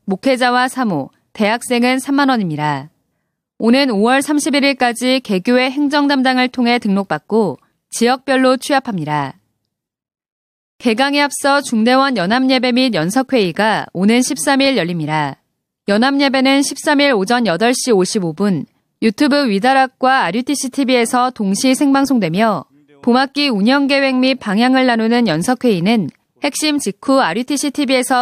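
No technical faults detected.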